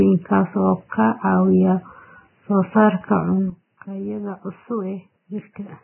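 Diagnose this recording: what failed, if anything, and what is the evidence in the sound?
Vorbis compression, throughout. The whole speech clip is band-limited with nothing above 3 kHz, and what remains has the hissy, grainy texture of heavy codec damage: roughened tones, smeared consonant attacks, and noise sitting where fine spectral detail should be. The failure is at the codec stage, likely a Vorbis encode at a very low bitrate, around 10 kbps. At that rate the encoder drops the treble and quantises the residue so coarsely that the detail is replaced by noise of similar energy.

Sudden gain jump, at 3.50 s. From that instant to the end of the clip, speech and background noise drop together by about 10 dB, with no fade between the two levels. Because the noise floor falls along with the speech, this is a gain change applied to the digital signal, not a change in how loudly anyone spoke. 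The likely cause is a digital gain setting or a bit shift taking effect between one sample and the next with no ramp.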